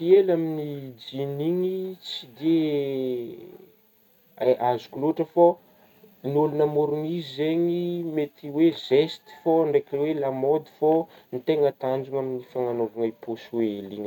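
No technical faults occur at any point in the recording.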